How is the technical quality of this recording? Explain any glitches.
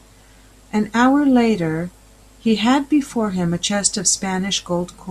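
No glitches turn up anywhere in this recording, so there's nothing to explain here.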